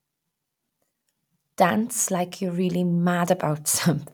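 Clock drift buffer slips mark this speech clip with a regular click roughly every 0.83 s, from 0.22 s to 3.54 s. The steady spacing suggests two devices running on separate clocks that disagree by around 200 parts per million. That mismatch would likely make the buffer between them creep until a handful of samples is dropped or repeated, producing each click.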